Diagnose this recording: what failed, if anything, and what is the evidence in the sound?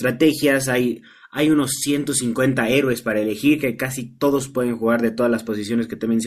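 Nothing failed here as far as I can hear; the speech comes through with no faults at any point.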